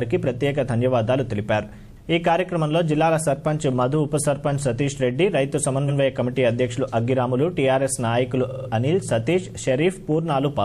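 Repeated frames: stretches of compressed audio were delivered more than once, so a 92.9 ms block replays once at 5.88 s and a 46.4 ms block stutters four extra times from 8.48 s.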